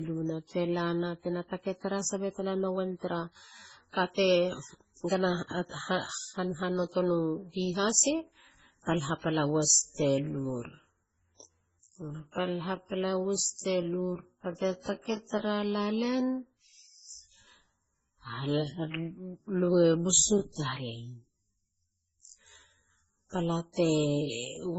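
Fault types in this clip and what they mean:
Transcoding between lossy codecs: The whole clip sounds like low-rate MP3, around 16 kbit/s, likely re-encoded as Opus at 32 kbit/s. Smeared, watery detail mixes with a second layer of artefacts, and nothing remains above about 7.7 kHz. A spectrogram shows a hard ceiling there, with blotchy, patchy energy below it.
Time-stretched section: From 9.46 s to the end, the speech abruptly slows to about 0.62 times its pace at unchanged pitch. This is likely from stretching software repeating short pieces, which makes the speech drag. The waveform shows elongated segments, and spectrogram harmonics stretch without shifting.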